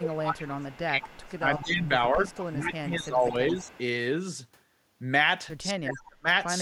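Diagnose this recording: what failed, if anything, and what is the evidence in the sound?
Call processing failed. From 0 to 3.72 s the speech dips, by about 20 dB at worst, for roughly 3 s in total. From 5.73 to 6.28 s it nearly vanishes, dropping about 40 dB. This is likely speech suppressed in double talk. The echo canceller ducked this talker along with the loudspeaker echo.

Call processing also let an echo leak through. A faint delayed copy of the speech, trailing by 215 ms, appears at 0.71–0.79 s, 1.27–1.67 s, 2.28–2.62 s and 3.29–3.78 s, between about 35 and 20 dB below the speech. The likely cause is a loudspeaker's echo escaping cancellation.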